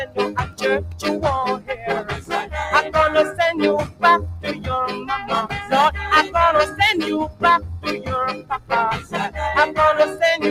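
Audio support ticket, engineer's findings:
Noise suppressor applied to music or sounds, throughout. Level breathes by around 15 dB: onsets pass, sustained and decaying material sinks, tails clipped, ambience thinned. Probable component: speech-tuned noise suppression left enabled. Mechanism: steady content classed as noise and attenuated. Unlike compressor pumping, the gain drop doesn't track loud peaks. It hits held, quiet-changing sound while sparing transients.

Sound cut by the noise suppressor at 0.45–0.62 s, 1.57–1.84 s, 2.1–2.53 s, 3.86–4.03 s, 8.35–8.71 s and 8.99–9.14 s. Each a localized sag, deepest about 12 to 15 dB, lasting between about a sixth and under half a second. Same suppressor: gain clamped where the sound held steady. Distinct from dropouts: level dips rather than going silent, and attacks survive.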